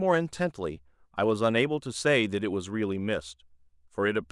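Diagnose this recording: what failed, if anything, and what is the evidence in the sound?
Nothing failed in this recording.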